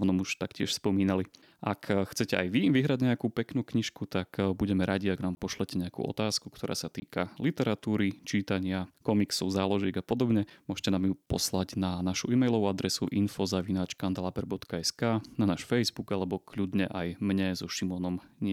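A speech clip with two short, hard dropouts: the first from 5.35 to 5.37 s, right after "tak budeme radi ak", and the second from 7.00 to 7.02 s, after "nejakú otázku ktorá sa". Each is a block of digital silence lasting 20 ms, where the signal drops abruptly to silence and returns with no fade. The identical length points to an output buffer that went unfilled in time.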